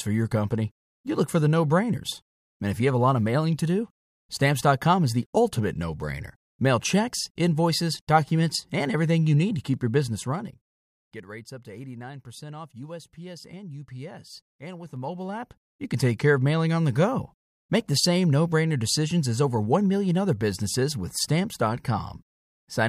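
After "need to keep your", 9.94 to 10.88 s, zipper noise: the level falls roughly 15 dB in 2 dB unsmoothed steps, about ten a second, each ticking audibly. It rises similarly from 14.8 to 16.0 s, before "take care of mailing".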